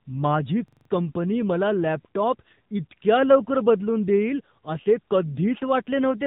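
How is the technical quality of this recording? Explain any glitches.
Quality's held back by two things: mobile-codec coloring across the whole clip and a short stuck-buffer glitch near the start.

The AMR narrowband mobile codec runs throughout, at 7.4 kbps. It keeps the band to 8 kHz sampling and rebuilds speech from a vocal-tract model with sparse pulses. Nothing above 3.8 kHz survives, so the speech sounds boxy, thin and buzzy, with plainly audible damage.

A system hang loop hits from 0.68 to 0.90 s, just before "कंपनी मला लॅपटॉप इतक्या". The system stalled while the audio hardware kept replaying the same buffer. A 42.67 ms slice, which fits a 2048-sample buffer, repeats five times, giving a rapid stutter at 23.4 Hz.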